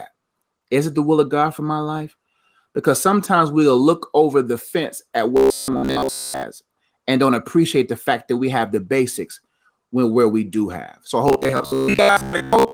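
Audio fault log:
5.37–6.43 s (after "over the fence at") and 11.28–12.73 s, robotic sound from repeated short buffers: rigid metallic 66.8 Hz buzz, likely from a 15 ms chunk looped over most of the audio.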